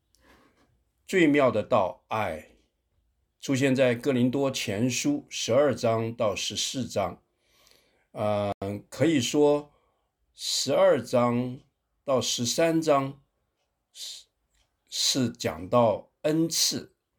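At 8.51 s a corrupt frame is muted: damaged compressed data was rejected, leaving an abrupt 0.1 s silent gap, fitting about three frames, seen as a blank vertical band.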